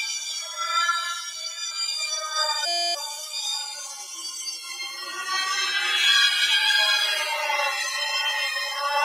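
Throughout the clip, a noise suppressor applied to these sounds keeps treating sustained and ambient material as noise, pulling levels up and down by around 5 dB. Sustained parts sink while attacks pass, so the sound pumps and thins.

From 1.24 to 1.58 s, the suppressor cuts a stretch of sound by up to about 6 dB, so it dips against its surroundings.

From 2.66 to 2.95 s, a system hang loop occurs. Playback freezes while the hardware keeps replaying a 2.9 ms slice, which fits a 256-sample buffer, about a hundred times. This produces a steady buzz at 345 Hz and loses roughly a third of a second of audio.

The suppressor then cuts sound again from 3.08 to 3.35 s, by up to about 6 dB, and from 3.71 to 5.14 s, by up to about 7 dB. During these stretches, sustained and decaying material drops away.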